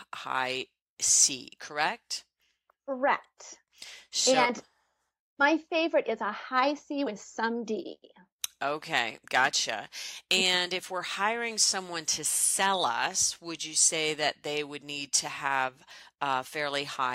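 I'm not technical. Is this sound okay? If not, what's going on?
Yes, it sounds fine; nothing stood out as a problem when I listened.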